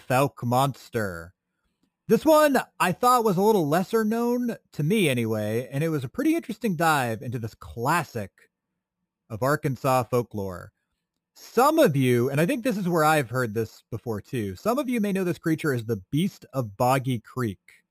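Imaging from sample-and-hold upsampling runs throughout: repeated samples, consistent with a 12 kHz source, leave mirrored copies from 6 to 12 kHz, a metallic fizz about 20 dB below the speech.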